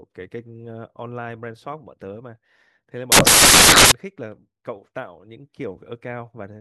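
From 3.12 s to 3.92 s the speech is replaced by a burst of loud, harsh broadband noise lasting about 0.8 s, caused by samples built from the wrong bytes. Over that stretch each sample was assembled incorrectly, with the bytes misaligned or in swapped order. The rapidly varying low-order bits end up as the most significant part of every value, so the waveform becomes broadband hash at high level.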